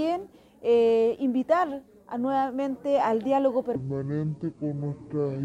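A section at the wrong speed runs from 3.75 s to the end of the clip at 5.44 s, where the audio suddenly drops to 0.6 times its original rate. Because speed and pitch are tied together here, everything in that stretch turns slow and deep, falling by around ten semitones. The sound is most likely being played back against the wrong clock, so fewer samples per second are consumed than were captured.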